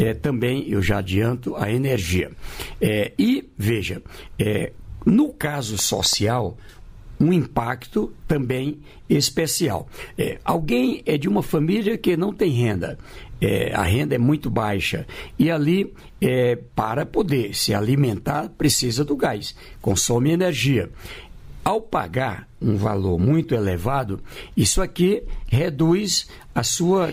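From 5.47 s to 6.4 s there's a train of clicks: around seven sharp, same-shaped pops at an uneven pace, averaging about 5.4 a second. They jump out roughly 5 dB above the surrounding sound, so they tick right over it rather than hiding underneath. The cause is likely something outside the audio itself, such as interference from nearby gear or a faulty connection or power supply spitting out repeated pulses for that stretch.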